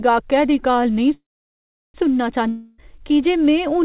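From 1.14 to 1.96 s the speech halts in a call audio freeze: a short fading buzz, then roughly 0.73 s of silence. Packets were likely held up until the jitter buffer ran dry. Speech resumes exactly where it stopped, so the clip is lengthened but nothing is lost.

From 2.49 to 2.82 s comes a long network dropout, likely packets that never arrived. A fading hiss fills about 0.29 s without reaching silence. When speech returns at "की जे", about 0.3 s is gone, which sets it apart from the freeze. Throughout, the band stops at 4 kHz, as expected of a narrowband G.711 call path.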